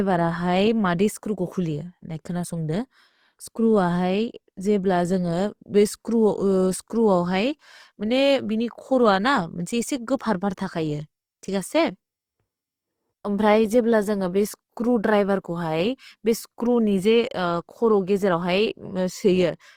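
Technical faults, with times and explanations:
Throughout: Opus compression. The whole clip has a grainy, rough texture, with tonal parts of the speech turning noisy. The likely cause is Opus running in its CELT music mode on speech at a low rate, which fits roughly 24 kbps. When bits run short, that mode keeps each band's energy but fills in detail by folding or noise. Bandwidth is still fullband, up to about 20.2 kHz, so this is damage to texture rather than muffling.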